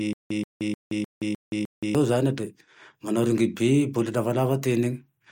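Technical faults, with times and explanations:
0.00 to 1.95 s, stutter with silent gaps: a 131 ms burst repeats six times with 173 ms of silence between, likely a stalled stream replaying its last fragment.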